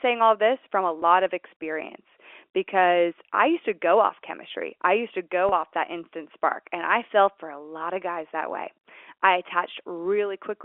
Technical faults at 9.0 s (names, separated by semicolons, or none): none